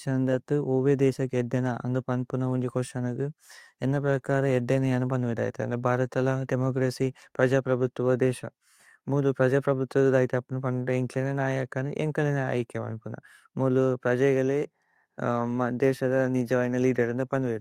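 Speech recording, with no audible technical faults anywhere in the clip.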